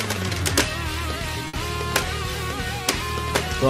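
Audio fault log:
1.47–1.55 s: burst of packet loss. Several consecutive packets failed to arrive in time, so the receiver had nothing fresh to play. It covered the hole by stretching the last received sound for about 60 ms while ramping its level down, which gives a brief smeared, fading tail rather than silence. About 60 ms of the original audio is gone, and playback resumes further along, with that stretch dropped.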